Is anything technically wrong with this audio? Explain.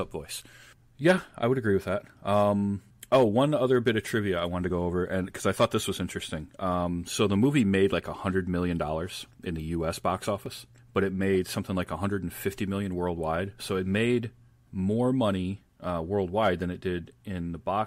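Yes. The speech has two dropped buffers (overrun), at 4.7 s, between "trivia I wanted to" and "go over and because", and at 10.46 s, just before "but it made something". Each skips ahead roughly 10 ms with no gap, likely from samples overwritten before being read, heard as a jump in the sound. The waveform shows a sudden discontinuity, and the spectrogram shows a thin vertical broadband line.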